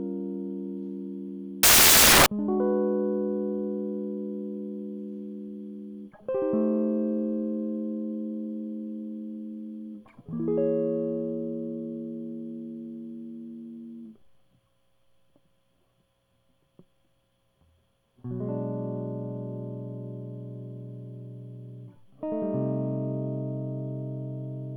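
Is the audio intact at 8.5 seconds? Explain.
Yes, the music is intact at 8.5 seconds, with no dropout, click, distortion or other fault audible at that point.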